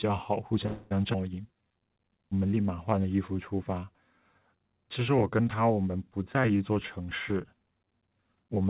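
This speech clip has four faults. From 0.66 to 0.93 s a call audio freeze fills about 0.25 s with a continued, fading buzz or hiss instead of new sound. It comes with no silence and no lost material, which points to packets held up in transit and a jitter buffer that likely ran empty, so the playout has 246 ms of delay inserted. From 1.13 to 1.16 s there is a skip ahead. Roughly 70 ms of audio is missing, and the two sides are joined with only a 10 ms fill, as happens when audio is dropped while later audio is already queued. From 1.42 to 1.75 s a jitter buffer slow-down plays the audio at 83% speed without changing pitch. Repeated pitch periods stretch the sounds by 64 ms, so the receiver is building up a reserve. From 6.61 to 8.65 s a jitter buffer speed-up runs at 110%, giving a hurried delivery at unchanged pitch. About 200 ms of short pieces are removed to reduce excess buffered delay. 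All of it passed through a call codec path whose G.711 mu-law coding at 64 kbps leaves nothing above 4 kHz.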